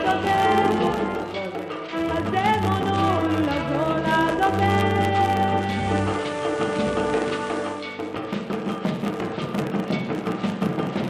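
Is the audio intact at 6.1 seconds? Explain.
No. At 6.1 s the sound carries a faint hiss, with a level shift of about 3 dB. This is digital radio blending to analogue. Between 5.61 s and 7.92 s a hybrid receiver lost its digital stream and cross-faded, over roughly 0.3 s, to the same station's FM broadcast. FM's noise floor lets hiss rise, here well below the programme.

Running beneath that is a steady 100 Hz buzz, a rapid ticking whose strength rises and falls with the level of the audio. This is a filter restarted on every block. The filter discards its memory at each block boundary and starts again from silence, so every block opens with a small click. Those clicks arrive at 100 per second, which fits blocks of 10 ms, and they merge into a buzz that is present at 6.1 s as throughout.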